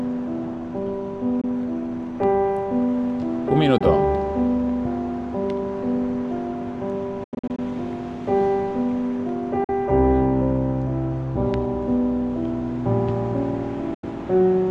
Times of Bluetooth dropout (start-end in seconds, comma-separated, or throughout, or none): 1.41-1.44, 3.78-3.81, 7.24-7.59, 9.64-9.69, 13.94-14.04